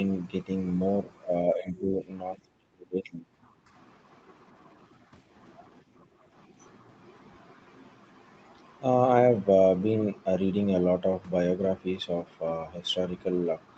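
Speech suppressed in double talk occurs at 1.54–2.02 s, 2.36–2.41 s and 2.59–3.25 s. The voice sinks by roughly 10 dB in the first two spots and by around 30 dB in the third, so the third nearly drops out. The likely cause is the far side talking at the same moment. The echo canceller could not tell the local talker apart from the loudspeaker's echo, so it pulled the whole microphone signal down.

Background gated by the echo canceller follows at 3.53–3.73 s. For about a fifth of a second the room sound beneath the speech falls away by about 11 dB, then comes back. The canceller clamped the microphone hard while the loudspeaker was active and released it once playback eased. The result is a brief hole in the ambience, heard over a call path whose Opus coding leaves nothing above 8 kHz.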